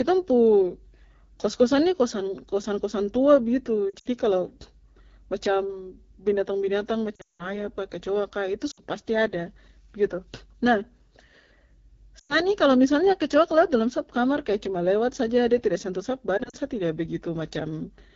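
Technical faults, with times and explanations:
Throughout: AMR wideband (HD Voice) codec. The speech runs at 8.85 kbit/s, the second-lowest AMR-WB rate. At that rate the codec's pulse-driven model of the vocal tract captures too little detail. Voiced sounds come out plainly rough and raspy. The top band, 6.4 to 7 kHz, is only shaped noise. The damage is clearly audible across the whole clip.
3.90–4.07 s, 7.16–7.56 s, 8.71–8.81 s (just before "pasti ada"), 12.19–12.40 s (just before "ini kalo misalnya kecoak"), 16.38–16.55 s (between "de tidak sentuh sap" and "sa tidak"): lost AMR speech frames. Damaged frames were replaced by repeating the last good settings at falling gain. Short gaps of 40 to 100 ms give quick dips and warbles. At 7.16 s a 180 ms run drops the sound to near silence within two frames. The voice then returns weak and rough.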